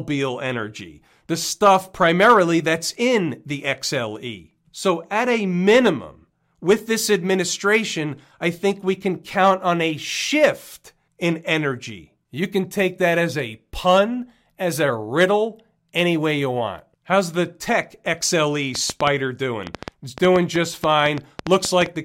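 From 18.75 s to 21.87 s, something is likely injecting short electrical pulses into the signal path, perhaps interference from nearby equipment or a faulty connection or power supply. The result is a train of clicks, around twenty in all at about 6.1 per second, spaced unevenly. Each click has much the same sharp shape and stands well above the speech, roughly 15 dB louder, so the ticking cuts through both the talking and the pauses.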